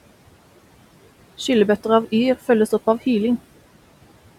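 From start to finish the speech carries noise suppressor artifacts. The suppressor pulls down the bands it judges to be steady room noise by about 17 dB, frame by frame, so the background, sitting about 19 dB below the speech, drops away in the gaps and swells back up beneath each phrase. On a spectrogram the noise floor looks patchy, dark between words and filled in under them. On the waveform, the pauses sit unnaturally flat.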